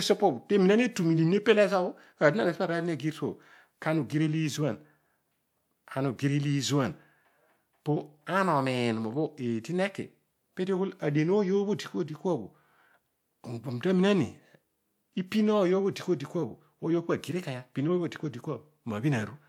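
No faults detected anywhere in the recording.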